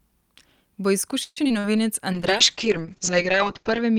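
From 1.23 to 1.79 s, repeated packet loss makes the speech choppy and robotic. Four holes are patched with stretched sound, the longest about 130 ms. From 2.13 s to the end, a call bitrate drop turns the speech rough and muffled. The top end falls from 20 kHz to 8 kHz, which fits a drop to around 7 kbps.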